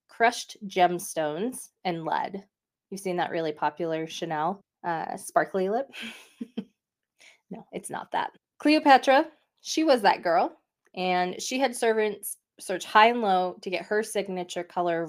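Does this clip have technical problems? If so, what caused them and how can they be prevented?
No, nothing in this speech recording stood out as a technical problem on listening, so there is nothing here that needs preventing.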